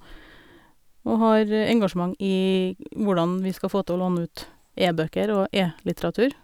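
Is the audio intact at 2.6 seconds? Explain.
Yes, the audio is intact at 2.6 seconds, with no fault at that moment.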